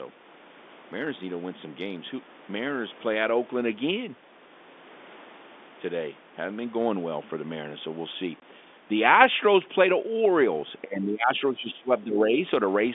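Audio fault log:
8.40–8.42 s, packet loss filled with silence: a 20 ms hole of silence cuts into the speech, with hard edges. Its length matches one lost packet, and unlike concealment, nothing masks the gap.
10.83–12.41 s, speech suppressed in double talk: the talker's level sinks by roughly 15 dB in pieces, about one and a half seconds in all, likely because an echo canceller confused overlapping talk with echo.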